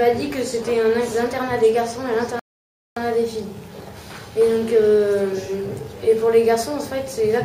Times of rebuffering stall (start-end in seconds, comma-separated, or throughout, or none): 2.39-2.96